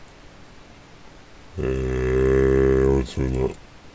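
From start to finish the audio suffers a wrong sample rate fault: the samples reach the output at a slower rate than they were captured at, with no conversion. Everything therefore runs at two-thirds speed and drops about seven semitones in pitch, which fits 24 kHz material being played at 16 kHz. The result sounds sluggish, low and heavy, with timing and pitch dragged down together by the same ratio.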